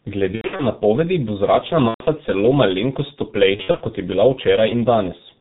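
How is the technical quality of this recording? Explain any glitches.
Quality is poor, mostly because of the codec, with three short dropouts on top.

The whole clip carries G.723.1 codec damage, and it's heavy. Nothing above 4 kHz survives, so the speech sounds muffled and a bit hoarse, with smeared consonants. That fits a 6.3 kbit/s mode. With such a low rate and long 30 ms frames, the codec's model of the voice can't follow fast changes, so transitions blur.

The three glitches are VoIP packet loss concealed by the speech codec. The first runs from 0.35 to 0.66 s, ending just before "napovedi bo zračna". About 180 ms went missing there, scattered across 240 ms, with the longest gap 90 ms. The second is at 1.88 to 2.04 s, between "napovedi bo zračna" and "celo malenkost", about 120 ms. The third runs from 3.56 to 3.83 s, before "kot je bila", about 150 ms spread over 240 ms. In each gap the decoder keeps replaying its last pitch and filter at falling gain. 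You hear the sound stretched into a buzzy tone or coloured noise that fades out, and the voice stays weak for a moment after real audio resumes.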